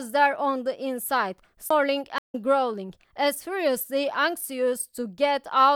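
A speech recording with two separate dropouts close together. At 1.69 s there is a CD skip: the player mutes for roughly 10 ms, leaving a small tick, and the speech continues from a different point on the disc, as if the laser jumped to another turn of the spiral. On a waveform this shows as a tiny gap with a discontinuity at its edges. On a spectrogram it is a thin vertical line where the harmonic traces break and do not line up on either side. Half a second later, from 2.18 to 2.35 s, comes a stream reconnect. The audio falls silent for 126 ms while the connection drops and a new decoder starts mid-stream, and the speech picks up about 70 ms later than where it stopped, so a short stretch is lost. The waveform shows a clean flat gap rather than a tick. On a spectrogram it appears as a blank vertical band across all frequencies, with the speech fading back in at a later point.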